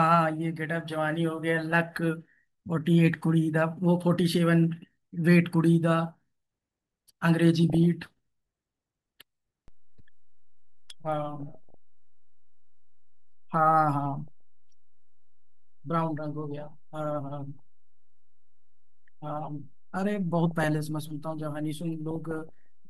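Weak DAB reception lets a small fraction of bits, a few in every thousand, slip past error correction into the MP2 audio stream, corrupting samples and scale factors so individual sub-bands jump in level for a frame at a time. This DAB burbling first appears from 7.70 to 7.77 s as a brief burst laid over the speech. It returns from 11.40 to 11.74 s, at 14.28 s, from 20.46 to 20.64 s, and from 22.11 to 22.49 s. The longer bursts are spread across more frames, up to 25.

At 9.68 s the waveform's zero line shifts, as if a converter recalibrated or an offset input was switched in. This DC step is heard as a low thump or click. The offset then holds to the end of the clip, and the speech carries on unchanged over the shifted baseline.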